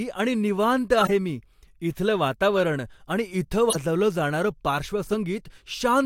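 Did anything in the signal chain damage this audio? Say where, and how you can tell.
Yes, the damage is at the codec stage. Corrupt frames were decoded at 1.00–1.11 s, 2.56–2.60 s and 5.07–5.14 s, each heard as a short chirpy, squeaky burst laid over the speech. Flipped bits in the compressed stream were decoded anyway, so gains and spectral codes were misread and energy landed at the wrong frequencies. The first burst is the loudest, peaking near -10 dBFS against about -15 dBFS for the other two, and each spans a handful of frames.

Compressed frames were also skipped at 3.69–3.76 s. The speech jumps forward by roughly 20 ms, which fits codec frames that were missing or rejected as damaged.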